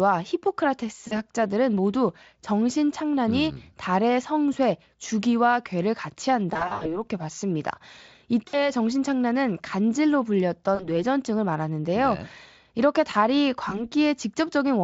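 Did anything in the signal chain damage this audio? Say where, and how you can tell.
Yes. VoIP packet loss concealed by the speech codec, a network-stage fault, occurs at 1.07 to 1.14 s, 6.53 to 7.01 s, 8.47 to 8.71 s, 10.75 to 10.92 s and 13.69 to 13.87 s. The decoder extrapolated missing speech into a fading buzzy tone or coloured noise and stayed weakened after packets resumed, worst near 6.5 s, where 200 ms was lost across 320 ms. The Speex coding itself sounds clean, consistent with a high-rate setting.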